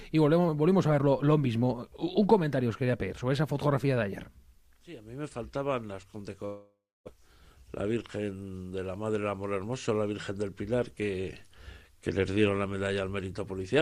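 From 6.45 to 7.14 s the last sound smears into a fading buzz, then about 0.29 s of silence, consistent with a likely long network dropout; roughly 0.6 s of audio never returns.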